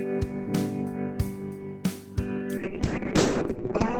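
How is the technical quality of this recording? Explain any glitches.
Quality degrades in the final stretch. A call bitrate drop at 2.58 s cuts the encoder from 32 to 6 kbps and narrows bandwidth from 20 to 8 kHz, leaving the sound muffled and rough until the end.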